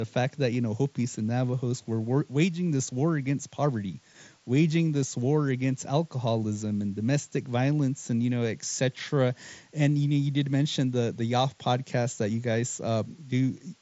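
From start to finish the speech rides on a constant, even hiss, roughly 35 dB down: low bit depth with dither, with a noise floor that fits about 8 bits. Unlike undithered rounding, it never turns gritty or distorted and does not track the speech, even within the headset band ending near 7.7 kHz.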